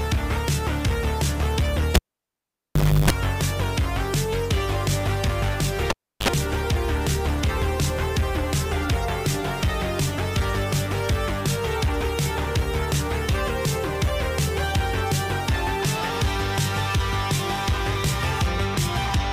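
At 1.95 s a live cable is pulled and plugged in. A pop opens 1.1 s of near silence. While only the tip touches, 50 Hz mains buzz runs 0.32 s, then another pop. At 5.90 s it repeats: 0.33 s out, 54 ms of buzz.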